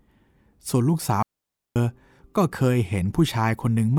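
From 1.23 to 1.76 s the speech drops into a clean hole of near silence, with no noise burst: a digital wireless dropout, the receiver muting for 0.53 s after losing data.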